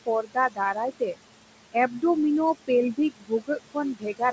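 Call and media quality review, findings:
Noise suppressor artifacts, throughout: background held down by about 22 dB, pumping up under speech and sinking in gaps. Frame-by-frame band gains lowered on steady noise. Room noise sits about 12 dB under speech; G.722 band limit near 8 kHz.

Speech cut by the noise suppressor, 0.06–1.19 s, 1.73–2.03 s, 2.94 s to end: soft consonants and endings swallowed, drops up to about 22 dB (about 17 dB in second span). Suppressor classed low-level speech as noise; roughly half a second affected first span, around 150 ms second.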